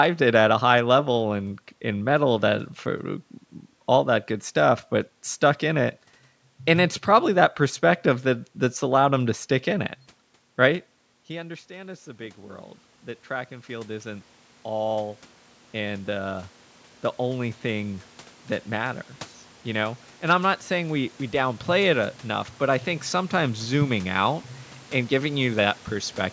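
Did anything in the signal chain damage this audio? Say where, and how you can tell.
Yes. From 11.28 s to 26.28 s the automatic gain control in the call processing rises by about 18 dB. It follows a drop in level of about 19 dB near 10.5 s, roughly when the talker moved away. Voice and room noise swell together, which a talker stepping closer would not cause.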